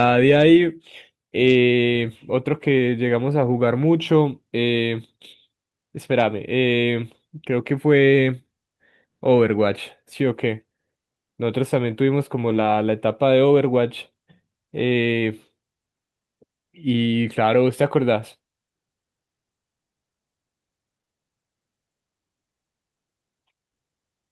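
At 12.49 to 12.67 s, lost packets were rebuilt from error correction. Low-bitrate copies filled the hole, so there is no gap, but the sound turns rough and noisy.

Short concealed packet loss follows at 20.97, 21.01 and 21.05 s, each dropping about 20 ms. The decoder extended the preceding sound, giving a brief smeared wobble.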